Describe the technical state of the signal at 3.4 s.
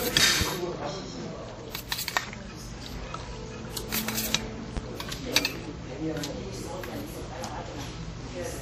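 At 3.4 s the audio carries the same layered coding damage heard across the whole clip: smeared, swirly high-frequency texture overlaid with a second set of warbling artefacts, and nothing above 15.3 kHz. This is likely transcoding between lossy codecs, with the character pointing to a low-rate MP3 pass, a WMA pass at a similar rate, then a higher-rate MP3. Each later encoder spent bits re-coding the earlier artefacts, and the lowest cut-off in the chain persists.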